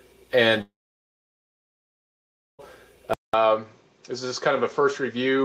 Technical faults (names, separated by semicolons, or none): long network dropout; input switched to a poorer device